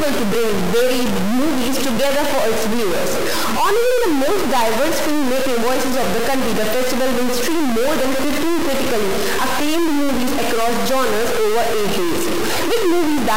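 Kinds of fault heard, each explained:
Stuck bit, throughout the clip: the sound carries a harsh, buzzy distortion from start to finish, and quiet stretches fill with a gritty noise floor instead of falling silent. This is likely one data bit held fixed at 0 or 1 by a broken line or converter. Roughly half the samples are pushed off by that bit's weight, a step of around -15 dBFS, in a pattern that follows the waveform. That step is high enough to make the noise in pauses clearly audible.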